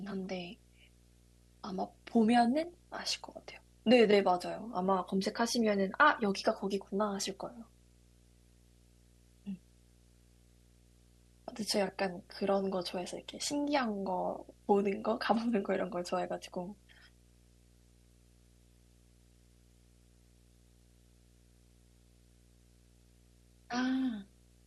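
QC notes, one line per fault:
throughout: video or display buzz, a 60 Hz field-rate buzz with hash above it, sitting about 30 dB below the speech, from a screen or video cable coupling into the audio path.
2.63–2.74 s: DAB burbling, brief blips of noise in single sub-bands, consistent with a run of damaged MP2 frames. Around a third of a percent of bits were corrupted and got past the error correction.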